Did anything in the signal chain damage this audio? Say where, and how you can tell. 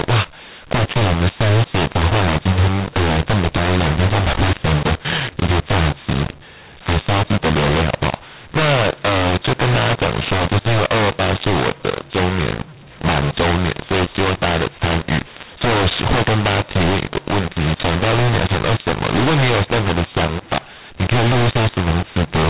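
Yes. At the codec decode stage, the G.711 stream was written as A-law but decoded as mu-law, a mu-law and A-law mix-up that lasts the whole clip. The two laws map the 8-bit codes onto different logarithmic level curves, so every sample is expanded with the wrong curve. Levels come out scrambled, some too loud and some too soft. The speech sounds harsh and distorted throughout, and the pauses fill with noise instead of falling to near silence.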